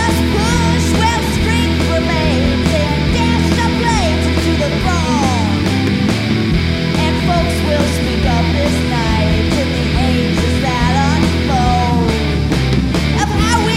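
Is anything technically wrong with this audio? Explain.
No, nothing in this audio stood out as technically wrong on listening.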